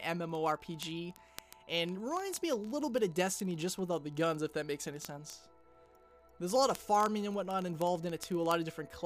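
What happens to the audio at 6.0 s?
Word clock ticks are running through 6.0 s, part of a steady train that lasts from 0.13 s to 9.05 s. The receiving device is reading a digital link on its own clock, not locked to the sender's, and the two drift apart by something around 700 parts per million. Each time they slip past one another a single sample is dropped or repeated, leaving a sharp tick roughly every 30 ms, so the sound carries a fast, buzzy ticking throughout.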